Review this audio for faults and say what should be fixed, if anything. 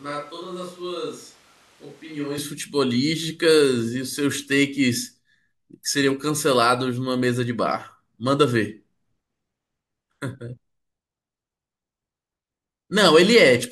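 From the start to 2.38 s, a switch to a distant microphone, likely after the close mic dropped out, leaves the speech hollow, roomy and roughly 10 dB quieter. Monitoring the close microphone during recording, with a backup recorder on it, would prevent this.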